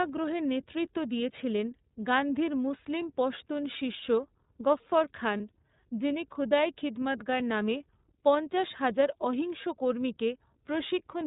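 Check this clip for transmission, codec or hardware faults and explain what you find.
Two faults are present: iLBC codec coloration throughout, and one brief dropout.

iLBC codec, whole clip: narrowband, frame-independent excitation coding, consistent with the 13.33 kbps, 30 ms mode, leaves speech plainly rough and synthetic. The spectrogram shows nothing above 4 kHz.

Lost iLBC frames, 5.37–5.41 s, between "গফ্ফর খান" and "যিনি খুদাই খিদমৎগর নামে": this fits one missing 30 ms frame. The decoder repeats the last pitch cycle with noise, producing a short buzzy held vowel. The spectrogram shows a flat harmonic smear there.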